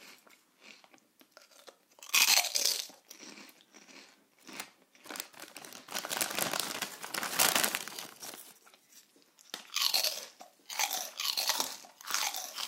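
A doubled audio track appears from 10.41 s and runs to the end. The likely cause is a second, slower capture path or an edit that left two copies of the material out of step. The result is a full-band duplicate trailing about one and a half seconds behind, roughly 5 dB quieter, with no decay or room colour. It cuts in abruptly at 10.41 s, so earlier sound audibly repeats over the newer material.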